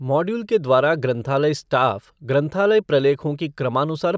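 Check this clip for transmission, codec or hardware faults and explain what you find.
No transmission, codec or hardware faults turn up in this clip.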